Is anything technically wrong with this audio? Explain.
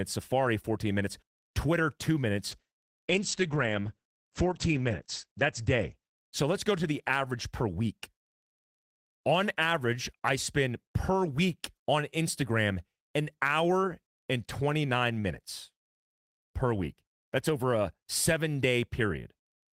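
Yes. From 2.54 to 6.77 s the speech turns rough and muffled, with highs above 8 kHz gone for nearly 3 s. This is a call bitrate drop: falling bandwidth estimates forced coarser encoding, fitting a fall from 32 to about 10 kbps.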